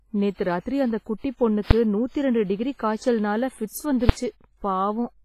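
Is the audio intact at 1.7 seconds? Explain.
No. At 1.71 s, between "நேத்து ராத்திரி அந்த குட்டிப்" and "நூத்தி ரெண்டு டிகிரி காய்ச்சல்னால", a single loud bang cuts through: invalid numbers at full scale. A calculation produced invalid values that pinned the output to one extreme for about 5 ms, which fits a 256-sample block. Throughout, the speech also sounds washy and ringing, with hiss that breathes with the signal and nothing above 15.4 kHz. This is heavy codec damage, likely from WMA compression at a low bitrate around 24 kbps.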